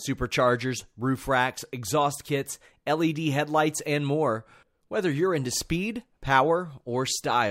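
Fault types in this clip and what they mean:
No technical faults are audible.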